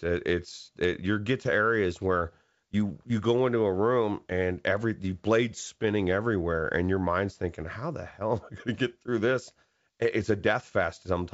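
Speech, carried over G.722 wideband telephone coding, which gives clear band-limited sound with a faint upper-band hiss. At 5.52 s there is a brief pop and rough burst. These are bit errors on an ADPCM link, at a very low error rate. The flipped bits upset the decoder's step size and predictor, so the damage rings on briefly, which fits a couple of corrupted frames.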